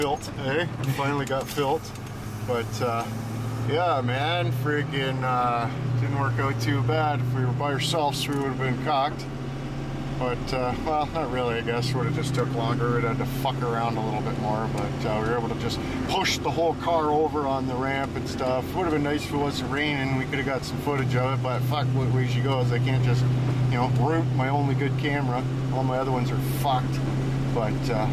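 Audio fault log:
No faults were detected anywhere in the audio.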